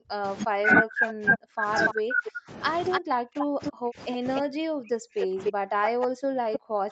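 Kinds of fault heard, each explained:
Speech suppressed in double talk, 0.0 to 6.9 s: the level dips and the top end thins throughout, at its deepest falling by roughly 40 dB, with parts chopped away. This likely comes from an echo canceller that heard both sides at once, could not tell the talker from the loudspeaker return, and turned everything down together, so the talker is pushed under whenever the far side is active.
Echo leak, 1.08 to 1.94 s, 2.9 to 4.41 s and 5.21 to 6.9 s: a copy of the speech trails the original by 293 ms, about 10 dB below it in the first stretch and about 5 dB below in the later two. This is likely a loudspeaker on one side whose echo canceller left part of the microphone pickup in place, so that the remainder was sent back down the line as a delayed repeat.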